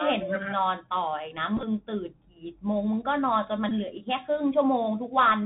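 From start to end the sound is band-limited to about 4 kHz by the Bluetooth CVSD headset codec, whose one-bit up-or-down steps at 64 kHz leave a granular hiss and scratchy s sounds. That grainy texture and the slope-overload grit on loud high sounds set it apart from a clean low-pass filter.

Between 1.57 and 1.64 s a Bluetooth headset packet repeated fault strikes in short scattered runs, the longest around 10 ms. Lost packets are filled by replaying earlier ones every 3.75 ms, giving a buzz near 267 Hz rather than the silence of a plain dropout. A second, briefer burst follows at 3.69 to 3.72 s.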